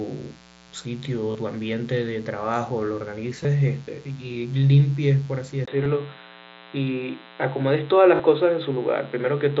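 A steady, raspy buzz sits under the speech for the whole clip, at about 25 dB below it, with harmonics climbing well into the kilohertz range. This is mains buzz at 60 Hz: sharp switching spikes from a dimmer, rectifier or poorly shielded lead leak into the signal twice per cycle.

At 1.32 to 1.35 s the sound briefly freezes into a held, buzzy tone with a small warble as normal audio resumes, and the same happens at 8.16 to 8.20 s. Shorter blips at 3.43 s and 5.84 s do the same. These are concealed Bluetooth headset packet losses of 30, 15, 15 and 37.5 ms. The receiver papered over the missing audio by repeating the best-matching piece of the waveform just before each gap.

At 5.66 s there is a 20 ms dropout, and from then to the end the speech turns dull and boxy, with nothing above 4 kHz and a new noise floor about 45 dB down, though loudness barely changes. The input was likely switched to a poorer device, replacing the wider band the mSBC headset link carried before.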